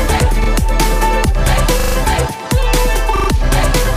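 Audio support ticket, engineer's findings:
Repeated buffer, three events. Playback device starved of new audio and replayed its last block, with hard joins at each repeat and a loop length that fits a 40 ms buffer. At 0.44–0.48 s, a single extra play, a brief stutter. At 1.80–1.96 s, four extra plays, a longer rapid stutter. At 3.16–3.28 s, three extra plays, the same stutter. Probable component: output buffering or feed to the playback device.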